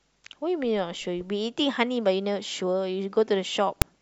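Right near the end, at about 3.82 s, there's a split-second burst of file tags played as audio. A block of text metadata got read as samples, so you hear a loud, hard-edged rasp.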